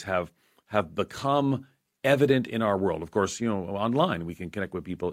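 No technical faults are audible.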